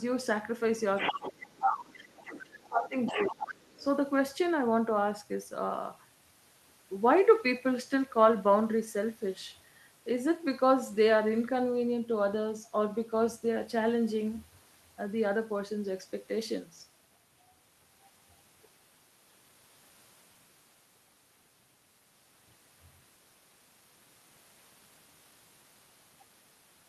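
Right at 0.96 s the other side's voice starts leaking through, running to 1.31 s at about 5 dB under the talker. That's likely the far end playing on a loudspeaker and not being fully cancelled. Almost immediately, from 0.98 to 1.97 s, the talker's speech gets suppressed in double talk. It dips by as much as about 25 dB for around a second, likely because the echo canceller can't tell the two voices apart and ducks everything. Inside that dip, from 1.61 to 1.78 s, the leaked voice comes up to roughly the same level as the talker. It lingers faintly from 1.96 to 2.51 s, about 20 dB down.

The suppression hits again from 2.47 to 2.95 s, another drop of around 25 dB. Then the far voice bleeds back in from 3.06 to 3.84 s at about 10 dB under the talker. It overlaps a milder duck from 3.12 to 3.52 s, only about 5 dB deep.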